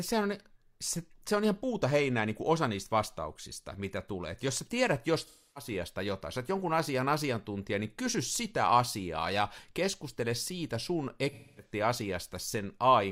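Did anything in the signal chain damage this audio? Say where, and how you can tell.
Yes. The damage is at the codec stage: AAC frame loss with concealment. Between 5.21 and 5.71 s, after "jos sä tiedät" and before "jotain sä jonkun asian", the speech turns into a smeared, noisy patch. The same happens from 11.30 to 11.72 s, after "ja keskustele siitä sun". Each gap points to a run of several lost frames, roughly 0.3 s and 0.26 s of missing audio. The decoder filled it by reusing the last good spectrum, so the sound is smeared rather than silent.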